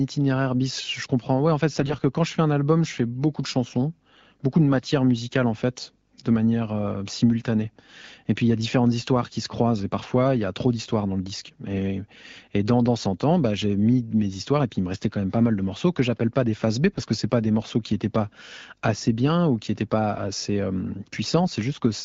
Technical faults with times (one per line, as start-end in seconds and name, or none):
1.79-1.96 AMR bit errors
16.92-17.04 AMR bit errors